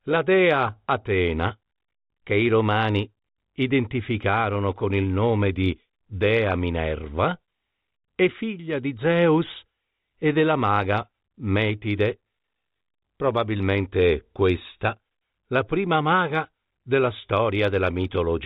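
Nothing in this speech recording stood out as a technical problem on listening, beyond the narrow, band-limited character of its telephone-grade coding.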